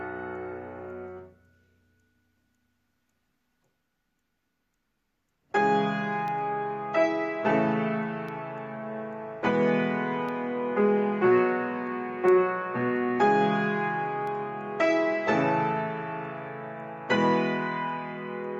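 A background task stalls the USB bus or audio driver every 2.0 s, causing periodic USB or driver dropouts from 6.28 to 14.27 s: about five sub-millisecond gaps of silence, heard as evenly spaced ticks.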